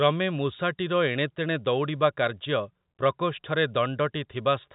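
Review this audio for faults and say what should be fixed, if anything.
No faults; nothing needs fixing.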